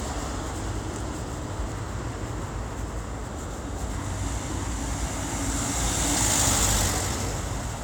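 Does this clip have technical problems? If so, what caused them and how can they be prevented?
No, this recording of sounds has no technical problems: the signal shows no audible faults from its opening to its final moment, so there is nothing here that needs a cause or a remedy.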